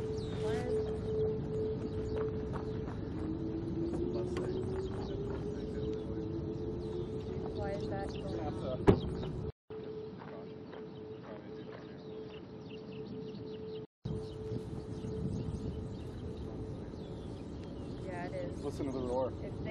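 From 9.50 to 14.05 s the input likely switched to a poorer device: a 200 ms gap, then a duller, band-limited sound with nothing above 5.9 kHz, about 5 dB lower level, and added background noise.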